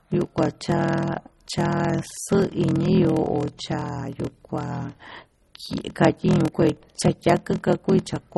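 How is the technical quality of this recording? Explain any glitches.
The technical quality is poor. Two faults run through the whole speech clip.

Block size mismatch (padded), throughout: the audio is chopped by regular tiny silences, giving a steady buzz at 41.7 Hz. Each block carries real sound only for part of its length, and the remainder is zero-filled before the next stage reads it. This fits 1024-sample blocks being read as blocks of roughly 1152. That stretching slows the speech to 0.889 times normal speed while the pitch stays about natural. A waveform shows flat near-silent gaps at regular intervals. A spectrogram shows thin vertical stripes spaced evenly in time.

MP3 compression, throughout: the speech sounds watery and swirly, and consonant onsets are smeared. Nothing remains above 11.9 kHz, where the encoder chopped off the treble to save bits. Weak frequency components are dropped and reappear frame by frame. 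The damage is plainly audible, which points to a low bitrate of around 32 kbps as the likely cause. A spectrogram shows a hard horizontal ceiling at 11.9 kHz and patchy, flickering islands of energy below it.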